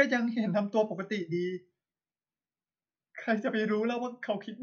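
No technical faults can be heard anywhere in the speech.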